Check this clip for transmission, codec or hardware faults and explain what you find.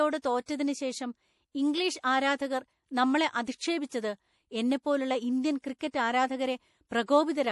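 The speech carries two codec faults: compression damage throughout and five brief pre-echoes.

Across the whole clip the sound is watery and swirly, with nothing above 11.4 kHz. This is likely MP3 compression at a low bitrate, which fits about 48 kbps. Starved of bits, the encoder cuts the treble at a fixed point and drops weak frequency lines that flicker between frames. A fixed ceiling plus that swirl distinguishes it from a plain low-pass filter.

Pre-echo occurs at 0.46 to 0.48 s, at 2.02 s between "ശേഷം ഇംഗ്ലീഷ്" and "ആരാധകർ നമ്മളെ", at 3.44 to 3.47 s after "ശേഷം ഇംഗ്ലീഷ് ആരാധകർ നമ്മളെ", at 5.61 to 5.64 s after "എന്നെപ്പോലുള്ള ഇന്ത്യൻ", and at 5.91 to 5.94 s. The quantisation noise spreads across the transform block into the quiet moment before a sharp onset. Each time, a hiss of 14 to 32 ms comes before the attack, which sounds softened. Unlike a click or dropout, the hiss always leads into an attack.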